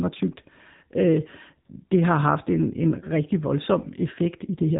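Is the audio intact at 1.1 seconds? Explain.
No, the speech at 1.1 s sounds buzzy, synthetic and dull above 3.8 kHz throughout, the mark of AMR narrowband mobile coding at a low bitrate near 8 kbps.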